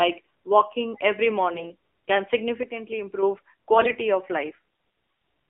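AMR narrowband mobile codec damage runs through the whole speech recording: the band is squeezed to roughly 300 Hz to 3.4 kHz, and the vocal-tract model is driven by sparse pulses, giving a plainly buzzy, synthetic tone that points to a low mode near 7.4 kbps. AMR bit errors hit at 1.54 to 1.72 s, just after "walking every", and again at 3.74 to 3.98 s. On a weak radio link, around one bit in twenty arrived flipped in the less protected parts of each frame. The excitation pulses and fine pitch, gain and spectral values land wrongly, so the voice keeps its pitch and level but turns hoarse and gargly.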